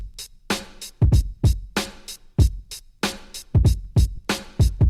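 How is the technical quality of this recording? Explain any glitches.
The recording has two brief glitches, both from lost LE Audio frames. At 2.41 s a gap of about 7.5 ms, which points to a single lost frame, is patched by the LC3 decoder. It replays the previous spectrum with randomised signs, leaving a grainy blur. From 4.16 to 4.19 s a longer 30 ms loss produces a noisy smear where tones lose their pitch.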